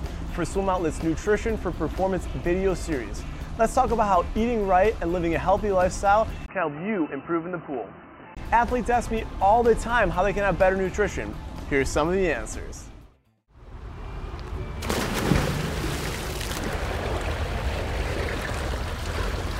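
Input switched to a poorer device, from 6.46 to 8.37 s. A gap of about 20 ms opens at 6.46 s, then the sound turns dull and boxy, with nothing above 3 kHz, drops a few decibels in level, and carries a new background noise well below the signal. This is likely the input moving to a narrower-band microphone or headset call profile, whose own band limit, tone and noise floor take over until the original input returns at 8.37 s.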